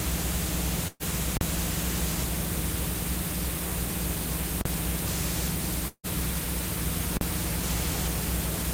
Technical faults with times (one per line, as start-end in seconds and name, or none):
0.87-1.03 burst of packet loss
1.37-1.41 invalid numbers at full scale
4.61-4.65 invalid numbers at full scale
5.88-6.06 long network dropout
7.17-7.21 invalid numbers at full scale